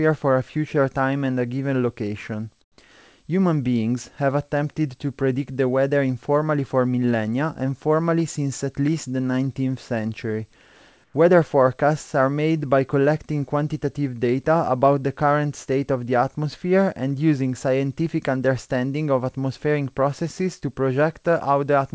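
In this speech clip, sent over a call path that cuts everything above 8 kHz (consistent with a wideband codec such as G.722), the sender likely paused transmission during two speech gaps, and the receiver filled them with synthetic comfort noise in place of the background. From 2.62 to 2.78 s (160 ms), the real background gives way to a flat, featureless hiss about 12 dB quieter. From 11.04 to 11.14 s (100 ms), the substitute is only about 2 dB quieter.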